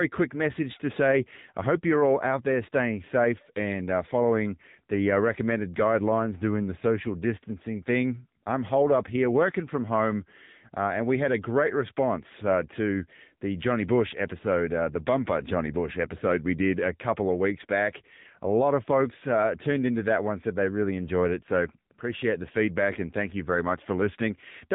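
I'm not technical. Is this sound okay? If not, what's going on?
No. From start to finish the speech has been through AMR narrowband mobile codec compression, the kind used on older phone calls. Nothing above 3.8 kHz survives, so it sounds thin and muffled, and the coding damage is plainly audible as a buzzy, synthetic edge.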